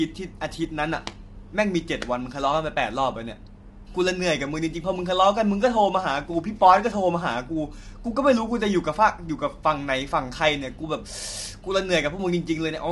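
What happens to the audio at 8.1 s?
At 8.1 s the speech carries the same damage heard from start to finish: a rough, grainy texture that is plainly audible, most likely from low-delay AAC compression such as AAC-ELD at a low bitrate, around 32 kbps. Its short frames resolve pitch harmonics coarsely, so noise fills the gaps between them. On a spectrogram the harmonic stripes look smeared and speckled, and all energy stops sharply at about 11.6 kHz.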